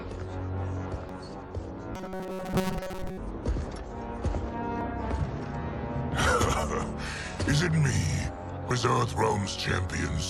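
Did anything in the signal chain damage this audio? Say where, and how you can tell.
Yes. At the codec or storage stage, compressed frames are skipped at 1.09 s, 4.81 s and 8.71 s. The audio jumps forward by whole frames of about 92.9 ms: roughly two frames (about 200 ms) at the first point and one (about 100 ms) at the others. On a waveform the envelope jumps abruptly, and on a spectrogram a brief vertical smudge sits at each join.

From 1.95 s to 3.18 s, the sound turns into a rigid, metallic buzz at 188 Hz that still loosely follows the underlying sound. It is likely caused by starved playback buffers, where the software repeats the last short block, about 5.3 ms, for most of that stretch and drops the real audio. On a spectrogram this appears as evenly spaced horizontal harmonics at multiples of 188 Hz. On a zoomed waveform, identical cycles repeat.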